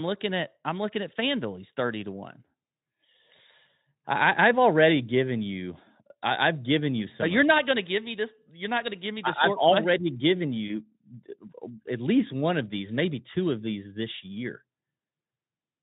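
At 10.67 s a single 20 ms packet of this speech went missing, and the Speex decoder covered the gap with VoIP packet loss concealed by the speech codec. It extended the last pitch and spectral shape it had, pulling the level down as it went, then needed its state to rebuild once real data resumed. The result, through to 10.80 s, is a brief smeared stretch, buzzy or noise-like, where the sound thins and softens before clearing.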